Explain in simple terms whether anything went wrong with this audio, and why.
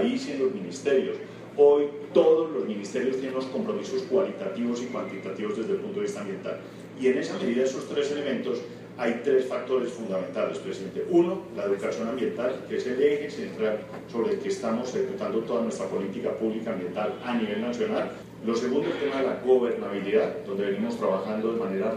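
From 10.70 s to the very end, a faint video or display buzz sits quietly under the sound. A screen or its video cable is leaking electrical interference into the audio wiring, and it repeats at the display's refresh rate of 75 Hz. That sets it apart from ordinary mains hum, which would sit at 50 or 60 Hz and sound smoother. This buzz is harsher, with a gritty hiss riding above it.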